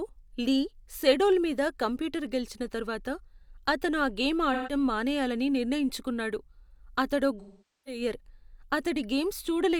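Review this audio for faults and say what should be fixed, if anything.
AAC frame loss with concealment occurs at 4.53–4.72 s, between "అతను ఆ గేమ్" and "మానేయాలని నిర్ణయించుకున్నాడు". There, about 128 ms of the stream (which fits three frames) is missing. The decoder patches it from the last good spectrum, giving a smeared, noisy stretch. A longer gap at 7.39–8.01 s (about 469 ms, which fits eleven frames) is too long to conceal: the patched sound fades toward silence, then returns. Stronger error resilience, such as redundancy, forward error correction or retransmission on the delivery path, would prevent these losses.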